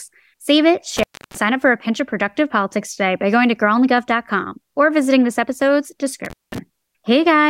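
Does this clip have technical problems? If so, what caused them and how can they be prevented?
Yes. Intermittent contact drops the speech twice, from 0.97 to 1.37 s just before "up for a pinch" and from 6.25 to 6.58 s right after "or visiting this episode's", with crackle at the edges as a loose connection opens for about 0.31 s and 0.19 s. Secure and inspect cables and plugs before recording.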